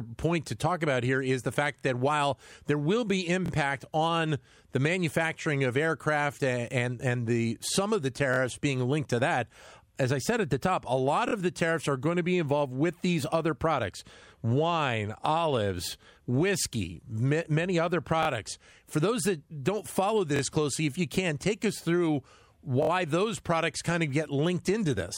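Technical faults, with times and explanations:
1.79, 3.46, 8.34, 11.29, 18.23, 20.36 s: repeated buffer. A slice of about 23 ms plays three times, twice extra, over roughly 46 ms. That length fits a 1024-sample buffer. New audio arrived late, so the device replayed the last block, and each hard join makes a short stutter.
22.83 s: repeated buffer. The same roughly 23 ms slice plays four times here, three extra, spanning about 70 ms. The longer wait for fresh audio stretches the stutter. No sound seems skipped once playback resumes.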